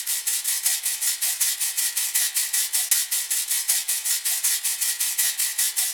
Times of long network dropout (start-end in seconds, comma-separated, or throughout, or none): none